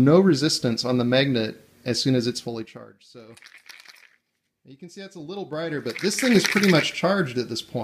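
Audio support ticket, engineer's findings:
Zipper noise 2.36–2.96 s (level drop of roughly 25 dB, fast ticking) and 5.12–6.44 s (similar rise, slower ticking). Gain stage steps in 3 dB increments, unsmoothed; each step clicks.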